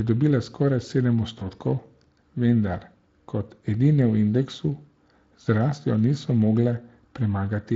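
At 1.39 s the speech drops out briefly and the gap is filled by VoIP packet loss concealment in the speech codec. One packet, about 20 ms of audio, went missing. The decoder extrapolated from its last pitch and filter state while lowering the gain, so the sound smears into a buzzy tone or coloured noise that fades. The effect persists until 1.51 s while the decoder state recovers.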